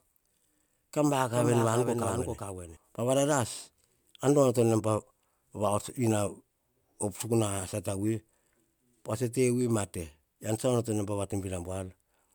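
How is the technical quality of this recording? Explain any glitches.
One fault is audible: a doubled audio track from 1.33 to 2.77 s. A full-band copy of the speech runs roughly 0.4 s behind, a few dB quieter, with no decay or room colour, and it starts and stops abruptly. Likely cause: a second, slower capture path mixed in.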